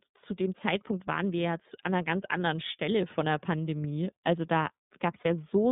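Speech that sounds thin, boxed-in and slightly rough and synthetic throughout, confined to roughly 150 Hz to 3.7 kHz: this is the iLBC codec, whose narrowband, frame-by-frame coding fits its 30 ms mode. At 5.21 to 5.26 s a brief buzzy, held-vowel smear replaces the sound before it snaps back cleanly, the mark of lost iLBC frames, consistent with one missing 30 ms frame being concealed by repeating the last pitch cycle.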